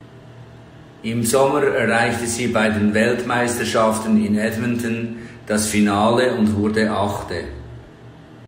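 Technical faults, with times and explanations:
Nothing in the speech stood out as a technical problem on listening.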